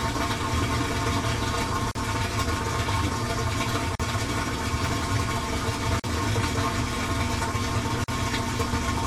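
At 1.91, 3.95, 6.00 and 8.04 s there's a gap at a join of encoded pieces: roughly 40 ms dropouts every 2 s, where separately encoded chunks kept their padding.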